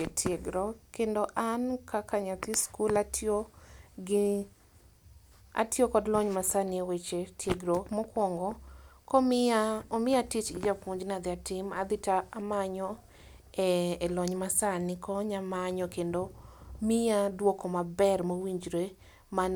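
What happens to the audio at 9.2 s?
Nothing goes wrong at 9.2 s; the speech plays through intact at that point, with no dropout, click, distortion or other audible fault.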